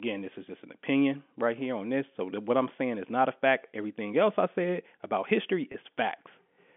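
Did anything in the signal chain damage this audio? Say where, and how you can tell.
Yes, at the network stage. Near 5.72 s, 20 ms of audio goes missing, which fits a single lost packet over the G.711 telephone line. The receiver fills the gap by repeating the last pitch period, so this packet loss with pitch repetition sounds like a brief held, buzzy tone.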